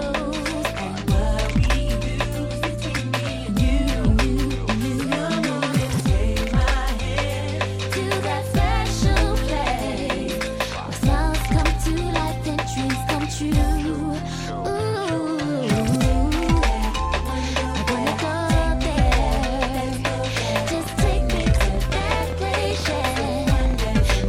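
From 20.74 s to 24.25 s, a train of clicks runs over the sound. About forty similar pops arrive at roughly 11.1 per second, unevenly spaced. They peak a few dB above the audio. Interference from nearby equipment or a faulty connection or power supply is the likely cause.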